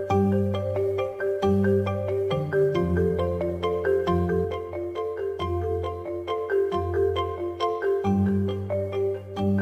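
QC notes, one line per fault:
4.44–9.61 s, channel delay (comb filtering): one channel lags about 20 ms, so the mono sum sounds rough or slightly doubled. The spectrogram shows fixed, closely spaced notch stripes from around 30 Hz upward.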